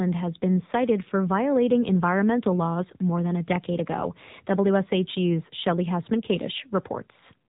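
Speech heard through an AMR narrowband mobile codec throughout. Nothing passes above about 3.8 kHz, so the sound is dull and boxed in. The codec damage is plainly audible: a buzzy, synthetic edge, which fits a low bitrate around 7.4 kbps.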